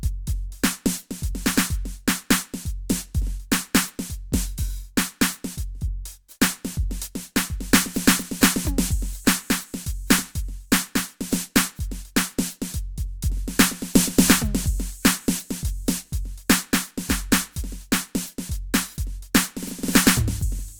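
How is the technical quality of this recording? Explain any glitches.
Nothing to flag here: the music runs along without a single glitch, dropout or hiccup anywhere in the recording.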